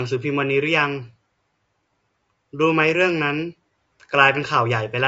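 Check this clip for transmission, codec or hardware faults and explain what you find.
One codec fault runs through the whole speech clip. Low-delay AAC compression is the likely cause. Its short frames resolve pitch harmonics poorly. The voice sounds rough and grainy, which fits a bitrate near 32 kbps.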